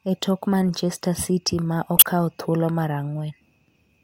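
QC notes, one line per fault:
1.97–2.03 s, corrupt frame decoded: a harsh burst lasting about 60 ms, roughly two frames' worth, where the decoder played damaged compressed data anyway. Misread gains and codes scattered energy across wrong frequencies, so a squeaky noise blip cuts in over the speech.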